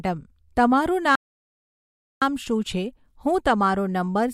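The player likely ran out of data or was blocked, causing a playback stall: from 1.15 to 2.22 s the speech cuts out for about 1.06 s before resuming.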